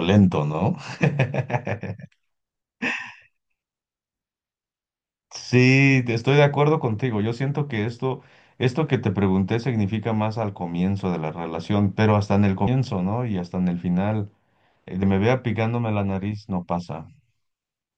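A speech clip in which the audio jumps forward twice, at 12.66 s and 15.01 s. Roughly 150 ms goes missing each time, which fits about seven skipped compressed frames of 24 ms.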